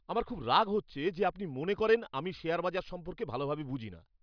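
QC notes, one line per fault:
No fault found in this clip.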